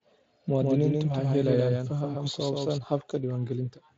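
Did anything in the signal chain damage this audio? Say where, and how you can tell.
Yes. From 0.6 to 2.78 s the speech carries a doubled audio track. A dry, full-band copy trails about 150 ms behind, about 5 dB quieter, and starts and stops abruptly. A second, slower capture path or a misaligned edit is the likely cause.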